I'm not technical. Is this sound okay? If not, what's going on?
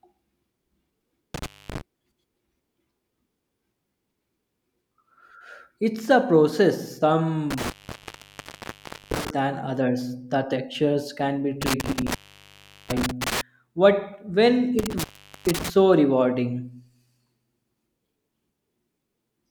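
No. The speech keeps cutting out with crackle, an intermittent contact, like a loose plug. It drops at 1.34 s, after "a process" at 7.51 s until "than others", after "textures can be" at 11.62 s, and at 14.79 s before "so rewarding".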